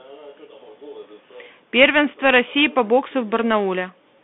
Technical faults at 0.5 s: Bluetooth CVSD headset codec

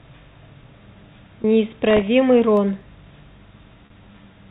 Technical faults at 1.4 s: packet loss with pitch repetition

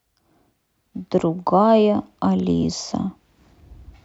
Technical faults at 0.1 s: none

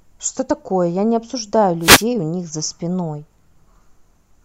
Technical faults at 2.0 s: wireless microphone noise hit

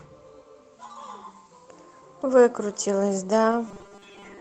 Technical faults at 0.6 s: none

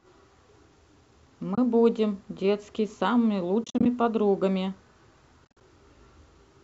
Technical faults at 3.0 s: none

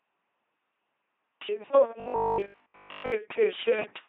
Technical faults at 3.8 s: LPC-10 vocoder

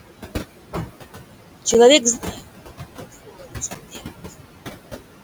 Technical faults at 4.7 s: noise suppressor artifacts; one channel inverted

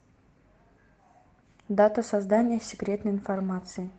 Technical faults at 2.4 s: call bitrate drop

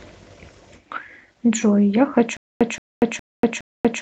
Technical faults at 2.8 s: stutter with silent gaps

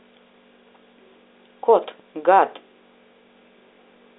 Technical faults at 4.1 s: none

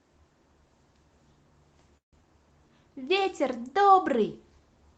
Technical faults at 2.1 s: call audio freeze

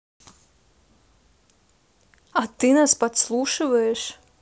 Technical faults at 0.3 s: none

